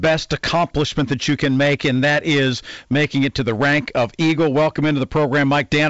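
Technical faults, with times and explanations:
Throughout, hard clipping: the speech is overdriven by about 12 dB, so around a tenth of samples are cut flat, adding harsh fuzz on every loud sound.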